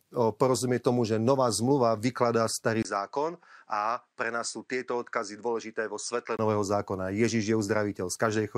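At 2.83 s the speech drops out for about 20 ms and returns duller, losing everything above 9.1 kHz, a few decibels quieter, and over a faint new background noise. This is likely an input switched to a poorer device. It differs from a simple filter or codec bandwidth drop because level, tone and noise floor all change together at a clean break, and all three revert at 6.39 s.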